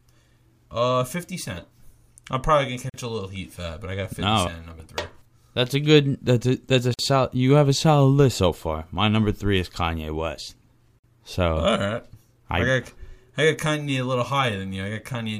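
At 2.90, 6.94 and 10.99 s the sound drops out for roughly 43, 49 and 49 ms. These are gaps at joins of encoded pieces, four seconds apart. Each piece kept its encoder's start delay and end padding, so you get a hole with smeared edges before things resume.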